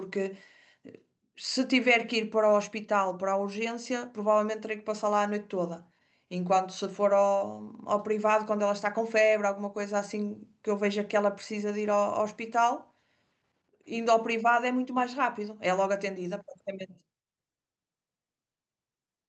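No technical faults turn up anywhere in this speech, which comes through an Opus call path at 32 kbps.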